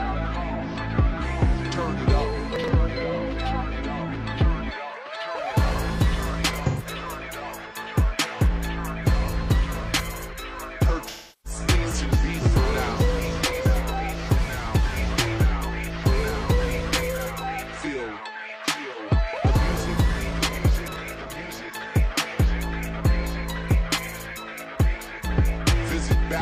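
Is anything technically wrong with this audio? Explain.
Yes, there are two kinds of fault.

Chunks out of order, at 2.56 to 2.68 s and 20.88 to 20.96 s: a 40 ms block of audio was delivered late and played after material that should have followed it. The first sounds about two blocks late and the second about one. Nothing is missing, but the sequence is scrambled, leaving a brief jumbled stutter at the hard joins.

AAC frame loss with concealment, at 6.66 to 6.86 s and 11.08 to 11.60 s: coded frames were lost and the decoder rebuilt the gaps from the last good spectrum. The gaps last about 128 ms and 341 ms, which fits roughly three and eight frames. The shorter one sounds like a smeared, noisy, phasey patch rather than clean audio, while the longer one decays to a very faint noise floor and fades back in.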